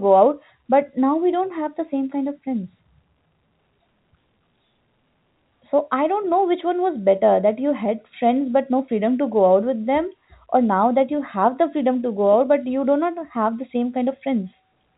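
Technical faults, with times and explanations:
Nothing technical goes wrong anywhere in this speech clip, so there's nothing to flag here.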